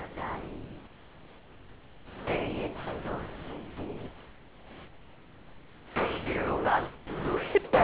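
From 0.0 to 7.55 s, and again from 7.64 s to the end at 7.84 s, speech gives way to steady comfort noise, likely sound dropped by the voice detector, losing about 3 s and 0.11 s of speech. The waveform flattens to a low, even band, and the spectrogram shows featureless noise below 4 kHz.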